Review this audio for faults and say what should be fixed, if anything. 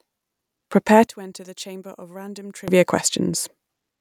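From 1.07 to 2.68 s the speech falls by about 22 dB to a faint copy, likely from one channel inverted, which cancels the centred voice on mono summing. Unlike a dropout, a faint residue remains. Check channel polarity against a mono fold-down before summing.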